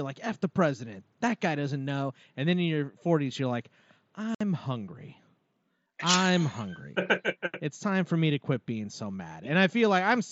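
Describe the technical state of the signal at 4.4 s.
Unconcealed Bluetooth headset packet loss runs from 4.35 to 4.41 s. Voice packets between headset and phone were lost, about eight of them, and silence or an idle pattern filled the 60 ms gap, leaving an abrupt hole in the wideband mSBC speech.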